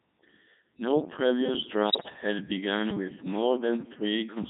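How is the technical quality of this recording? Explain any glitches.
Quality's pretty rough. The whole thing has the synthetic, buzzy character of heavy low-rate digital voice, plus a short burst of garbling near the middle.

The Codec 2 vocoder runs throughout at 3.2 kbit/s. It doesn't keep the waveform at all. It sends only pitch, voicing, energy and a coarse spectral envelope, and the decoder rebuilds the speech from sine waves. That's why everything comes out robotic and buzzy, with heavy damage to the natural texture of the speech and anything around it.

Then there are bit errors on digital voice radio, from about 1.89 to 2.10 s, right before "had begun with". Around one bit in ten arrives flipped, and since each bit in a vocoder this lean steers a whole frame's pitch, level, voicing or spectrum, the output lurches. The fifth of a second or so of damage, which fits roughly eight corrupted frames, sounds like warbly, bleepy, pitch-jumping gibberish before it settles back down.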